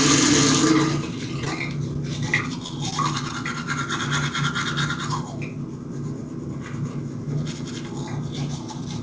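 Short concealed packet loss at 1.45, 1.94, 2.67, 2.91 and 3.29 s: each time about 10 ms of audio never arrived and was patched with extrapolated sound, heard as a brief smear or wobble, and seen as a thin blurred vertical seam in the spectrogram and a slightly smoothed waveform, within a band that stops at 8 kHz through the call path.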